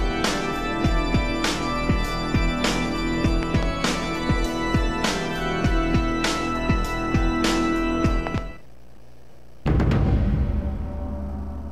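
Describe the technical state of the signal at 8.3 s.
A loud pop spans 8.27 to 8.40 s: two sharp thumps, about 15 dB above the sound, which carries on beneath them. The likely cause is a sudden voltage pulse entering the signal path. The waveform shows two tall spikes, and the spectrogram shows two thin, full-height vertical streaks.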